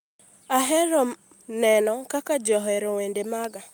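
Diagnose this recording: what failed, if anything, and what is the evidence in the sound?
Nothing failed: no stage of the chain leaves any audible evidence of a fault anywhere in this speech recording.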